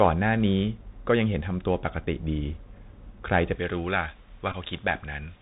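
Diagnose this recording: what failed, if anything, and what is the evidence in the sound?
Bluetooth CVSD headset codec at the codec stage, all the way through: everything's capped near 4 kHz, s sounds are scratchy, and a granular hiss sits underneath, consistent with a 64 kbps link.

Pre-emphasis left on from 3.56 s to the end: the treble jumps, about 11 dB up at 10 kHz against 1 kHz, so it turns thin and hissy. That fits a J.17 curve whose matching de-emphasis never got applied.

Bluetooth headset packet repeated around 4.52 to 4.55 s: a brief buzz near 267 Hz where the chip replayed old packet bits, which fits roughly four lost packets, about 15 ms, on the radio link.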